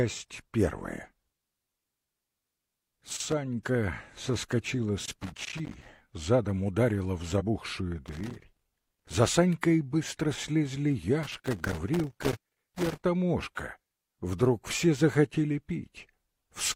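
Irregular bursts of scratchy crackle break up the audio at 2.56–3.33, 5.06–5.88, 8.06–9.14 and 11.23–13.03 s: loose connector crackle, where a worn or dirty contact rapidly makes and breaks as it shifts. At 7.36–7.42 s a brief glitch is damaged data in a compressed stream, where corrupted bytes made the decoder misread frames and resynchronise.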